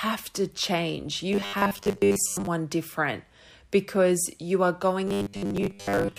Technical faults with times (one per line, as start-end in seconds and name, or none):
1.33-2.47 robotic sound from repeated short buffers
5.08-6.18 robotic sound from repeated short buffers